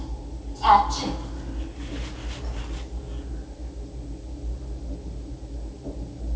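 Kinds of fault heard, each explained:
Nothing to flag here; the sound has just come over a call link, and the way it tops out at 8 kHz fits a G.722 codec doing its normal job.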